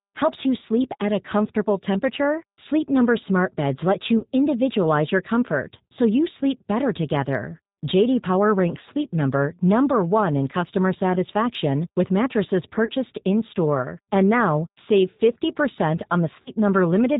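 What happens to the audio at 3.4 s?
At 3.4 s, as throughout, G.729 coding rebuilds the speech from a filter, pitch predictor and sparse pulses, giving rough, synthetic speech; the spectrogram is empty above 4 kHz.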